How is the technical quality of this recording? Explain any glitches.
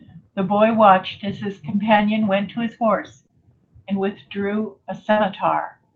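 The recording came through a call path whose content stops near 8 kHz, which fits a wideband Opus stream at around 20 kbps, and it has three packet-loss glitches.

At 1.97 s and again at 3.27 s there is short concealed packet loss. About 20 ms of audio never arrived in time, and the decoder patched each hole by extending the preceding sound for roughly 15 to 22 ms before crossfading back into real audio. You hear a quick smear or wobble. On a spectrogram, the sound runs unnaturally unchanged for a sliver.

From 5.11 to 5.19 s a burst of packet loss removes about 60 ms. The receiver stretched the last sound for around 56 ms while lowering its level, so it becomes a brief held buzz or fading hiss, and the audio then resumes further along with that stretch gone. A spectrogram shows a smooth, frozen band of energy fading out, and the waveform shows a decaying, overly regular segment.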